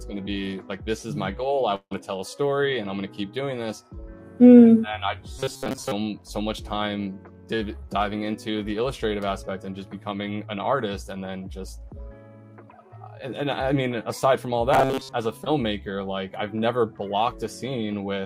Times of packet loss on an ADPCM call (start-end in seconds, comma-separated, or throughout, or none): none